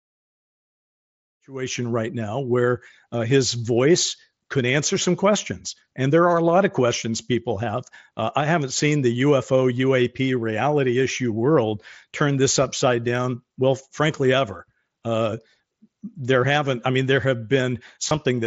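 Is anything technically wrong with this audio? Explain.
Yes. At 18.09 s, right near the end, there is a brief concealed Bluetooth headset packet loss. About 15 ms of the speech never arrived, which fits two lost headset frames. The receiving side filled the gap by repeating the closest-matching piece of the waveform just before it. Because the gap is so short, the patch is very brief. It passes as a buzzy smear held at full level, with a tiny warble as the real speech resumes. The mSBC headset link itself carries speech up to 8 kHz, and the opening fade-in runs from around 1.5 s to 1.94 s.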